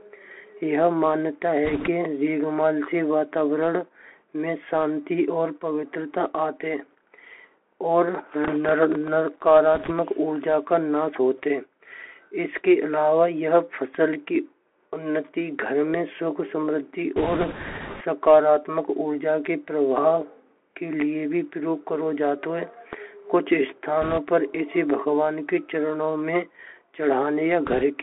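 Throughout this speech clip the sound is boxy and thin, with nothing above about 3.4 kHz or below about 250 Hz. A granular hiss sits under it, and s sounds turn scratchy. That is the Bluetooth CVSD headset codec. Its one-bit up/down tracking, consistent with a 64 kbps link, can't keep pace with loud high content. Short bursts of rushing crackle appear at 1.65–1.88 s, 9.75–9.92 s, 17.16–18.03 s, 24.02–24.18 s and 27.66–27.83 s. These are bit errors on a Bluetooth voice link, flipped bits that leave noise rather than clicks. The error rate is a few percent, and the roughest burst, the longest one near 17 s, is around 7 percent.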